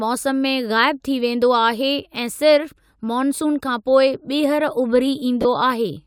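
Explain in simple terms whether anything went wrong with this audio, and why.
Near the end, at about 5.42 seconds, the speech briefly turns into a noisy smear for about 30 ms. This is a case of lost LE Audio frames. Some Bluetooth audio never arrived, which fits about three missing 10 ms frames. To fill the hole, the decoder replayed the last bit of sound it had, with its detail scrambled. That patch sounds like a short hiss instead of clear speech.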